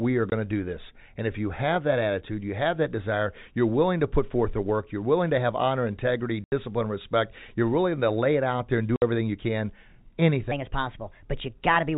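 Packet loss filled with silence breaks the speech three times: 0.30 to 0.32 s, 6.44 to 6.52 s, and 8.96 to 9.02 s. The holes last 20, 80 and 60 ms, all multiples of 20 ms, which fits 20 ms packets dropped singly or in short runs. The receiver inserted silence instead of concealing the gaps, so each one is a clean dropout with abrupt edges where the waveform is cut and restarted.

From 10.51 s to the end, the final section plays at the wrong speed, running 1.27 times faster than recorded. Because speed and pitch move together, the speech is raised by roughly four semitones and sounds high and hurried. The jump happens at a single point rather than drifting in, which is likely the result of that segment being resampled or played against a mismatched clock.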